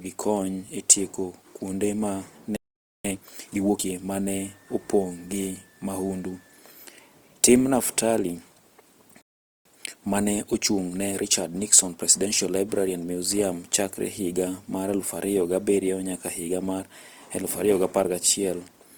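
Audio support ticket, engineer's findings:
Opus compression throughout: speech grainy and rough, not swirly like MP3, with full bandwidth kept up to about 20 kHz. Likely a 24 kbps Opus encode in music (CELT) mode.

Playback stall after "kuonde ma", 2.56–3.05 s (0.48 s), and again 9.22–9.65 s (0.44 s): output goes fully silent, then resumes. Likely player buffer underrun or blocked thread.

Time-compressed catch-up, 3.05–4.01 s at 1.5x and 9.65–12.55 s at 1.15x: speech hurried at normal pitch. Player trimming backlog by cross-fading snippets, not resampling, so no pitch rise.

Switching supply whistle, 4.28–6.59 s: faint high whistle about 35 dB below the speech, drifting between 1.73 and 1.82 kHz. The drifting pitch separates it from fixed mains hum. A switching power supply is in burst mode or beating with a second supply.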